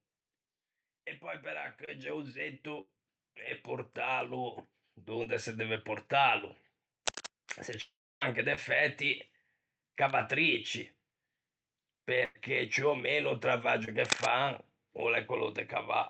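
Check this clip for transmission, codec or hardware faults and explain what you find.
Several faults are audible in this speech clip: a slow level rise, four brief concealed packet losses, two loss bursts, one long dropout and two bursts of scratching, all heard through a call codec path whose sound stops around 8 kHz.

Between 1.21 and 5.93 s, the speech and the background swell together by about 14 dB. This is automatic gain rising: the gain control judged the input too quiet and turned its gain up gradually rather than in one step.

At 1.85, 5.24, 8.55 and 13.85 s (the last just after "meno o"), there are brief smears or wobbles lasting roughly 40 ms. These are short concealed packet losses. About 20 ms of audio arrived too late, and the receiver bridged the gap by extending the preceding sound before blending back.

From 2.81 to 2.90 s and from 12.25 to 12.37 s, the sound holds as a fading buzz or hiss, then jumps ahead. 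Each is a burst of packet loss. About 60 ms and 100 ms of audio went missing, and the receiver stretched and attenuated the last sound across each gap.

From 7.82 to 8.23 s, the concealment decays into near silence before the audio returns further on, with roughly 400 ms lost. The likely cause is a long network dropout, in which nothing arrived and the receiver's extrapolation faded out.

From 7.06 to 7.26 s and from 14.05 to 14.26 s, there are rough, uneven bursts of scratching. The first is about as loud as the speech, and the second is somewhat louder. The likely cause is cable scratch noise, where a worn cable or connector is disturbed and its contact resistance fluctuates rapidly.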